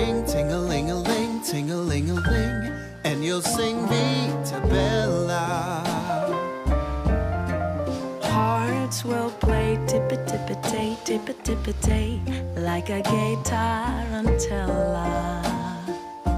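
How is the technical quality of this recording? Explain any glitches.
No glitches or faults are audible.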